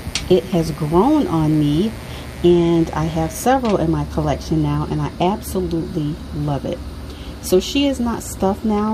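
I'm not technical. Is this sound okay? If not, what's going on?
No. Electrical interference from the 60 Hz power supply leaked into the recording, causing mains buzz: a steady, raspy hum from the start until about 3.45 seconds.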